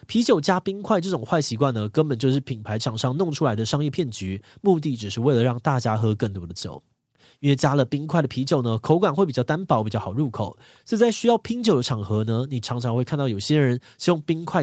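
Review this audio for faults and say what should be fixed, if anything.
At 4.40 to 4.44 s there's a brief scrap of voice coming back about 35 dB below the speech, trailing the original by 421 ms. That's likely an echo leak: the far side's loudspeaker reached its mic, and their echo canceller let a little through. To prevent it, have that side wear a headset or tune their echo cancellation.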